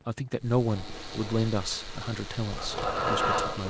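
Speech clip with an echo leak from 0.65 s to the end: a distinct copy of the speech trails it by 250 ms, only slightly quieter than the original, most likely because a far-end loudspeaker's echo canceller failed to remove it. Unlike room reverberation, it is a separate repeat rather than a smooth tail.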